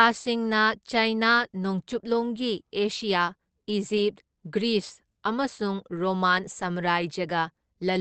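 Throughout, the speech is muffled and hoarse, with nothing above 8.6 kHz. This is likely Opus compression in its speech mode, consistent with about 16 kbps.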